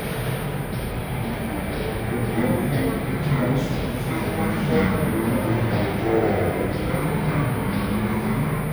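From start to finish the audio plays at half speed and a full octave low, because of stereo read as mono: alternating left and right samples are taken as one channel. A spectrogram shows everything squeezed downward, with a fainter mirrored copy in the upper half.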